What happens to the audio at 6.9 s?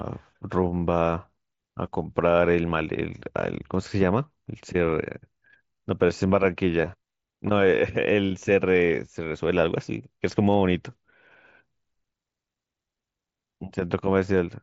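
Concealed Bluetooth headset packet loss runs from 6.82 to 6.88 s: about 30 ms of audio goes missing, scattered over 60 ms in gaps no longer than 15 ms. The receiver patches each gap by repeating the best-matching stretch of the preceding waveform, so you hear a brief buzzy smear and a slight warble as the real signal resumes.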